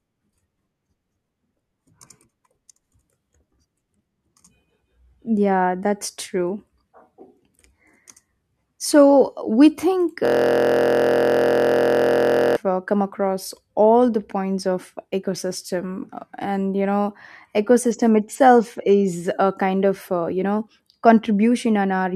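Right after "we think", at 10.25 s, there's a system hang loop: the machine froze while the hardware kept replaying one 23.2 ms slice, which fits a 1024-sample buffer, about 100 times. It's a steady 43 Hz buzz until 12.56 s, then "uh come across all".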